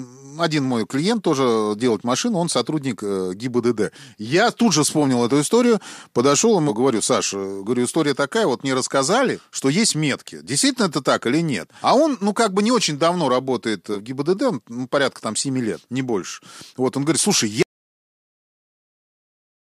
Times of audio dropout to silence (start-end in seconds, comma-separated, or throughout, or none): 17.62-19.76